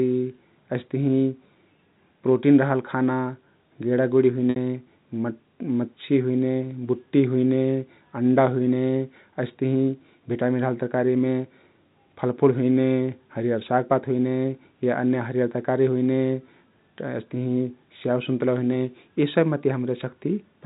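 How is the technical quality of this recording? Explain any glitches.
One brief glitch stands out in this telephone-band speech, which is carried by G.711 A-law coding at 64 kbps and cut off above 4 kHz.

From 4.50 to 4.56 s, the sound briefly holds on a buzzy, repeated tone that fades away before the speech resumes. This is packet loss with pitch repetition. About 60 ms of audio went missing, and the receiver filled the gap by looping the last pitch period and fading it out.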